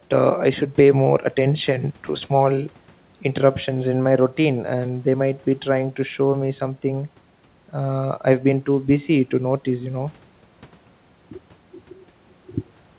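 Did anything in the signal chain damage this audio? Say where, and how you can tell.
No, the signal shows no damage at any stage; it carries the band limit of a telephone-grade G.711 mu-law call path at 64 kbps, with nothing above 4 kHz, and no faults are audible.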